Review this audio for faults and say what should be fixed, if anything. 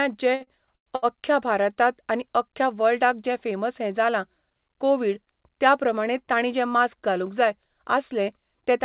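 Repeated stalls (stutter) from 0.35 to 1.05 s: packets arrived late or slower than they were played, so the jitter buffer ran dry five times. The receiver extended the last sound to fill about 283 ms, around 40% of that span, with the longest gap 110 ms. Nothing is lost, but the speech drags and stutters.

Short stall from a late packet at 1.74 to 1.79 s, just before "आनी अख्ख्या वर्ल्डाक जें": one packet was not there when due, as delay rose by 20 ms. The receiver held the preceding sound for 20 ms and then resumed from the same point, leaving a brief drawn-out moment with a slight buzz or dip.

To prevent both, give the jitter buffer more headroom or let it adapt faster to rising delay, and reduce network jitter on the sending path.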